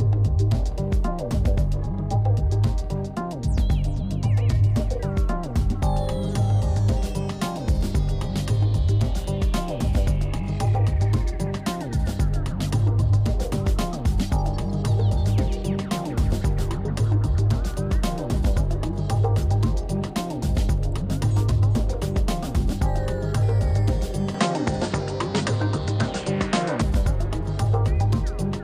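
From 24.34 to 26.82 s the sound narrows and dulls, with nothing above 9.1 kHz and a faint new noise floor; this is likely an input switched to a poorer device. No gap at the switch, level steady; the spectrogram shows a flat ceiling.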